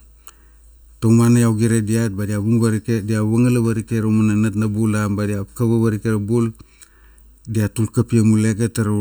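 Channel delay (comb filtering) runs throughout the speech. One channel arrives a fraction of a millisecond after the other, roughly 0.7 ms, and when the two are combined into mono, the content they share cancels at regularly spaced frequencies. The first notch falls near 700 Hz, with further notches repeating up the spectrum at roughly 1.4 kHz intervals. The result is a hollow, phasey tone whose coloration stays fixed rather than sweeping.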